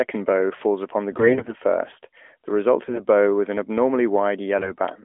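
AMR bit errors at 1.12–1.53 s, after "bow falls upon the", then 2.84–3.00 s and 4.58–4.72 s: flipped low-priority frame bits misplace excitation pulses, leaving level intact but sound hoarse and gargly.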